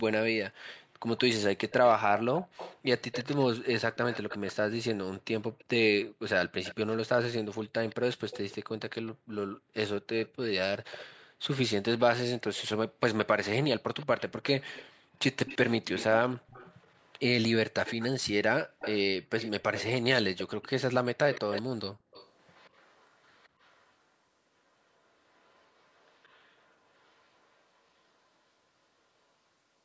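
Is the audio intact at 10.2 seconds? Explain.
No. An echo leak runs from 7.89 to 11.06 s: a faint copy of the speech returns 169 ms late, about 20 dB down, likely from a loudspeaker whose echo canceller missed it. A spectrogram shows each harmonic pattern repeated faintly just after itself.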